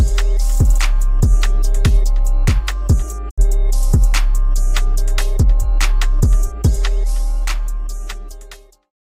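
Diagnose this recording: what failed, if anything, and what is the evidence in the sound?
A 20 ms fade to silence at 3.29 s, back at 3.40 s: a digital broadcast dropout at the receiver, muting through 64 ms of failed frames.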